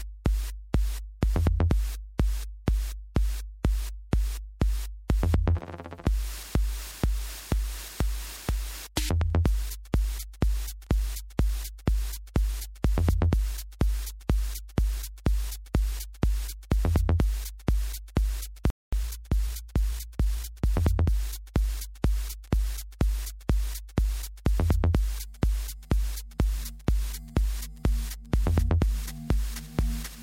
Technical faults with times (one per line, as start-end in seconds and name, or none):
18.70-18.93 playback stall
18.93-21.15 time-compressed catch-up